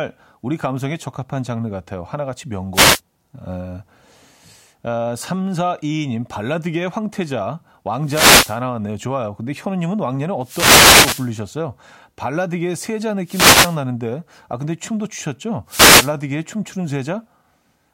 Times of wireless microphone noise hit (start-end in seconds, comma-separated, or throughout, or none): 2.73-3.01, 8.03-8.60, 10.41-11.32, 13.24-13.78, 15.67-16.13